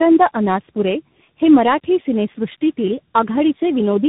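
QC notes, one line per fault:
Throughout, tandem speech coding: the speech sounds rough, muffled and warbly, with a grainy edge and nothing above 3.8 kHz. The call was decoded and re-encoded at each link boundary, passing through three speech coders in a row, so each one worked on the previous coder's already damaged output and the distortions compounded. The roughness points to a chain ending in CVSD, with earlier low-rate stages such as G.729A and AMR-NB adding the warble.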